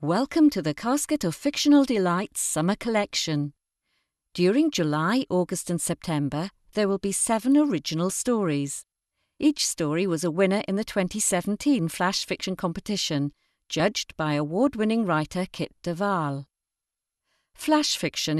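At 12.44 s and again at 13.80 s the speech jumps forward by roughly 30 ms. This is compressed frames skipped: each jump fits a single 26.1 ms coded frame that was missing or rejected by the decoder as damaged, so that stretch of audio is never reconstructed. Because adjacent frames overlap, each join comes out as a short smeared blip rather than a sharp click, with the speech resuming slightly ahead of where it left off.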